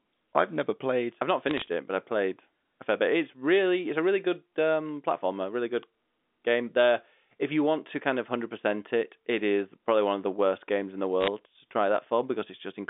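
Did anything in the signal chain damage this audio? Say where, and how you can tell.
Yes: bit errors on the digital phone line at 1.48–1.68 s and 11.21–11.28 s. Flipped bits, under one percent, corrupt single G.711 samples into sharp crackling ticks.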